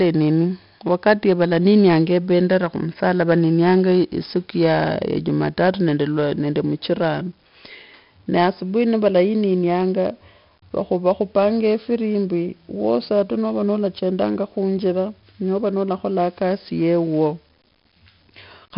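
From start to end, the speech carries 4-bit ADPCM compression. Each sample is coded as a coarse step from a prediction. The heavy damage adds gritty hiss that rides on every loud syllable. Nothing sounds above 5.3 kHz, which fits a rate near 44 kbps.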